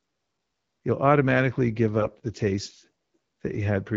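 A speech clip carried over the AMR wideband (HD Voice) codec, at a clear rate that fits around 12.65 kbit/s, with light coding damage. AMR bit errors strike from 2.00 to 2.12 s, between "you'll automatically give" and "the taste". There, speech turns hoarse and gargly, consistent with a handful of frames whose less protected bits flipped, at a rate of a few percent.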